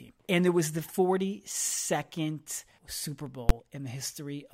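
At 3.49 s a processing stage in the chain hit invalid numbers at full scale: a calculation returned infinite or undefined values, and these were clamped to the largest value the format can hold, pinning the output at one extreme value, far beyond the speech's peaks, for one processing block. The stretch lasts about 11 ms, which fits a 512-sample block. Because the block is so short, the speech is interrupted by a single hard, very loud bang rather than a separate pop at each end.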